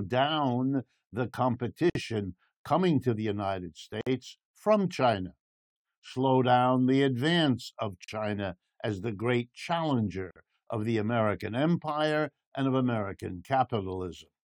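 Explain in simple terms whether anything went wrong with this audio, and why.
The speech briefly drops out for about 40 to 55 milliseconds at 1.90, 4.01, 8.04 (after "down the advance of") and 10.31 seconds (before "of the"). These are gaps at a join of encoded pieces: separately compressed chunks were joined with their padding silence left in.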